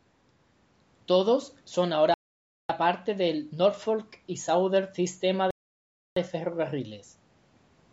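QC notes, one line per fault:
2.14–2.69 s, Bluetooth stall: the sound cuts to silence for 0.56 s, then resumes; likely the headphone buffer ran dry while interference held packets back for resending.
5.51–6.17 s, Bluetooth stall: a second dropout of 0.66 s of silence before playback picks up again, likely the same buffer underrun waiting on retransmitted packets.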